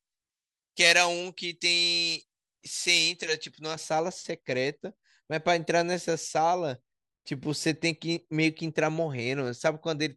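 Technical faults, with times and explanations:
0.00–3.76 s, pre-emphasis left on: the treble boost applied for recording or transmission was never undone, leaving about 11 dB more level at 10 kHz than at 1 kHz, a tilt that fits a J.17 curve. The speech sounds thin, bright and hissy on sibilants.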